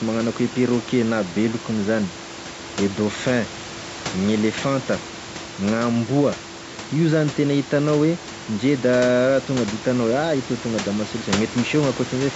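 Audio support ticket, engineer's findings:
No faults found; call processing and room noise normal.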